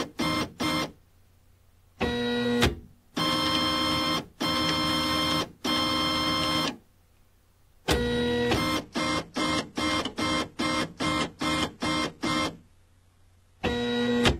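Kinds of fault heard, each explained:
Adaptive stream at a lower bitrate: at 8.81 s the stream gaplessly falls back to a thinner, more artefact-laden version; the spectrogram shows a hard ceiling at 12.3 kHz thereafter.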